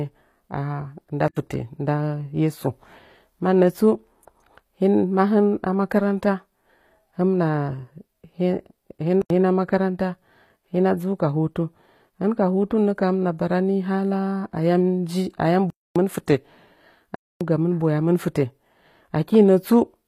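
Speech throughout, with plainly audible codec damage and nothing above 15.5 kHz. The treble sounds rebuilt rather than real. That points to HE-AAC compression, likely at a low bitrate around 24 kbps, where upper bands are copied up from lower ones. The sound cuts out four times in blocks of digital silence. The first is at 1.28 s and the second at 9.22 s, each 85 ms long, which fits a 4096-sample buffer. The third is at 15.70 s and the fourth at 17.15 s, each 256 ms long. The output buffer went unfilled in time, or a calculation produced invalid numbers.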